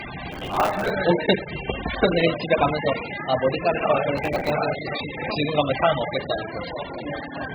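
From the start, everything sits dull and smeared with nothing above 5 kHz and a warbly texture, likely heavy AAC compression at a very low bitrate, around 8 kbps. Then from 0.32 to 0.90 s and again from 4.17 to 4.50 s, processor overload crackle tears gritty bursts into the sound, as runs of short audio buffers, about 5 ms each, miss their deadlines and replay stale chunks.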